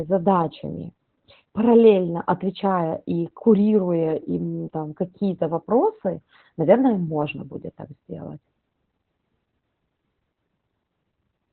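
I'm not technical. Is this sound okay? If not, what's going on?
No. All the way through, the voice sounds muffled and boxy, a little hoarse, with a faint robotic edge, much like a poor phone line. This is Opus voice compression pushed very hard. To save space, the coder keeps only the lower part of the sound, roughly what an old telephone carries, and rebuilds the voice from a rough model instead of the real detail, so crisp consonants and natural texture are lost.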